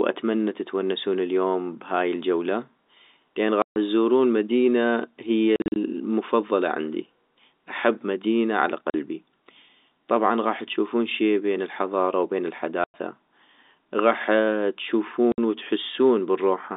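Packet loss filled with silence chops the speech at 3.62, 5.56 after "تزورون مدينة هي", 8.9 after "احب مدينة على", 12.84 after "شي بين الحضارة وبين", and 15.32 s. Holes run 40 to 140 ms with hard edges, which fits 20 ms packets.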